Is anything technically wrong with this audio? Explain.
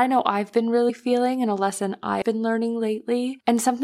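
Yes, the speech has two cases of compressed frames skipped, at 0.88 to 0.90 s and at 2.21 s. Whole blocks of coded audio were never played, so the sound jumps ahead: about 50 ms at the first point and about 100 ms at the second. That fits losing a couple of 23.2 ms frames, then roughly four or five. A spectrogram shows an abrupt vertical discontinuity where the patterns don't line up, and the waveform shows a splice.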